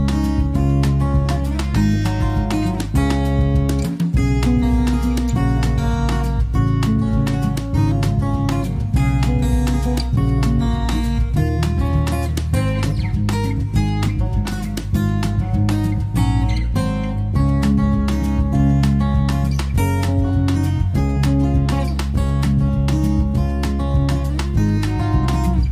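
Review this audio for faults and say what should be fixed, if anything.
Nothing here needs fixing, as the signal holds steady and continuous with no technical defects to be heard at any point.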